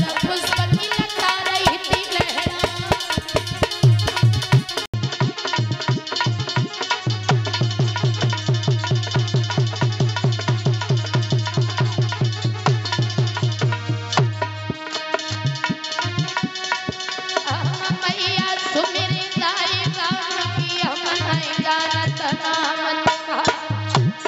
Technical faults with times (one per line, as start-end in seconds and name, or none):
4.86-24.27 input switched to a poorer device